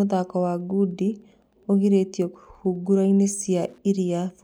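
Running under the speech from start to finish there's a faint, steady ticking, roughly ten clicks a second. That's Wi-Fi interference: a radio sitting close to the audio circuitry sends its beacon every 102.4 ms, and the circuit rectifies each burst into a small audible pulse. It's well down in level, something like 50 dB below the speech.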